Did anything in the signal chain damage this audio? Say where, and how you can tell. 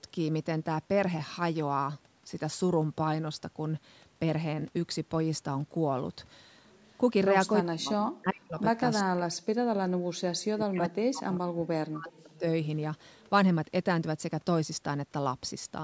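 Yes. The call's echo canceller is the damaging stage. From 7.66 to 8.59 s and again from 9.03 to 12.44 s, the talker's speech drops away. It falls by roughly 40 dB at its deepest, about four seconds in total. This is speech suppressed in double talk. The pattern is likely caused by the far side talking at the same moment. The canceller couldn't tell the near voice from loudspeaker echo, so it attenuated both.

From 13.02 to 13.29 s a faint echo leak appears. It is a delayed copy of the voice trailing by 402 ms, very low, about 35 dB under the speech. Most likely one end was on a loudspeaker, and that end's canceller failed to remove all of the pickup, so a residue was sent back. The long, fixed delay and the quiet repeat mark it as acoustic echo rather than a reverberant room. The call's microphone processing, with nothing above 8 kHz, is a separate, normal part of the chain.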